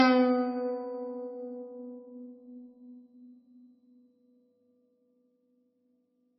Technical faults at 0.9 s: low-bitrate audio saved at a high bitrate

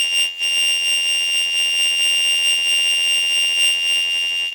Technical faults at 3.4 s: block size mismatch (padded)

